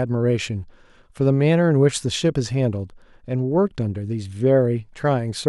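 Nothing stood out on listening to this speech recording.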